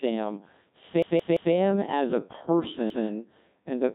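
From start to finish the speech carries heavy Codec 2 vocoder damage. Only pitch, voicing, energy and a coarse spectral envelope survive, and the decoder rebuilds each frame from sine waves, so the result is robotic and buzzy, with nothing above 3.8 kHz. The degree of damage fits the 1.6 kbit/s mode. Unlike the swirling or watery smearing of a transform codec, this is a uniform synthetic buzz on every voiced sound.

From 1.02 to 1.54 s a repeated buffer occurs. The same piece, about 171 ms long, which fits an 8192-sample buffer, plays three extra times with a hard join at each restart, giving a rhythmic stutter. At 2.90 to 3.07 s the same fault returns with one extra play. Nothing is lost at either point: the audio simply resumes late. That distinguishes it from a dropout, which leaves a silent gap rather than identical material heard again.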